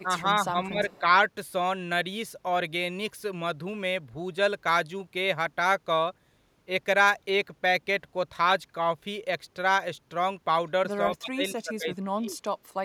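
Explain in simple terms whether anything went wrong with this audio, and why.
Yes, a few things went wrong. The main one is speech suppressed in double talk, which happened at 0.03 to 1.14 s, 11.17 to 11.94 s and 12.11 to 12.4 s. This is likely the call's echo canceller getting confused while both people talked at once and turning everything down to be safe. You hear the speech dip for about half a second in the first stretch. Near the end it drops much harder.

There is also a brief echo leak from 0.9 to 1.0 s. The likely cause is a loudspeaker on one side whose echo canceller didn't fully remove what its microphone picked up, so some of the sound was sent back. You hear a faint, delayed copy of the speech trailing about a fifth of a second behind. It is very quiet and lasts only a tenth of a second.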